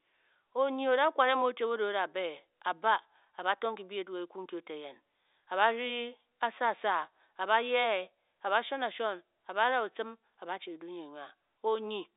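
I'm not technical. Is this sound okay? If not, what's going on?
Yes, it's fine: the speech has the narrow, slightly boxy sound of an ordinary landline call because it's been passed through standard telephone coding, but nothing is going wrong with it.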